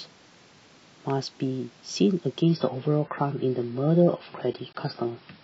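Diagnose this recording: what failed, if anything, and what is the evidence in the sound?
A slowing connection switched playback to an adaptive stream at a lower bitrate from 2.42 s onward; the speech abruptly loses everything above 5.6 kHz, without any gap.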